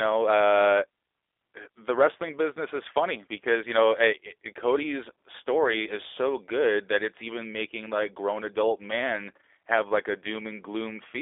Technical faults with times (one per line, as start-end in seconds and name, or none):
0.00-11.21 G.729 codec